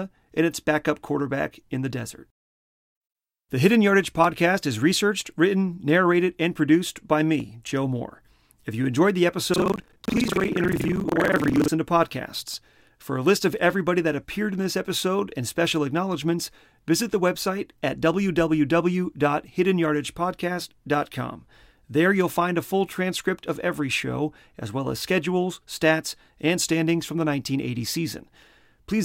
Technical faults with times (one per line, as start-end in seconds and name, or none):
9.52-11.71 buffer tearing